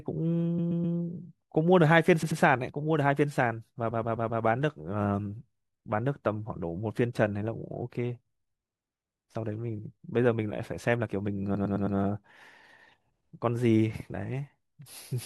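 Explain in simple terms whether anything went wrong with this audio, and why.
The speech stutters four times, replaying a short snippet over and over at 0.58–0.96 s, 2.22–2.39 s, 3.90–4.42 s and 11.54–11.97 s. These are repeated frames: bits of the compressed file were played again, making the recording slightly longer.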